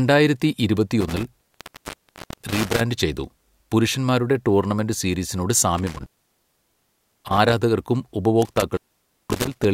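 Intermittent contact breaks up this speech at 1.01 to 2.81 s, 5.78 to 7.53 s and 8.42 to 9.65 s. A loose cable or plug opens for about 1.0 s, 1.19 s and 0.53 s, dropping the signal with crackle at each edge and faint hiss underneath.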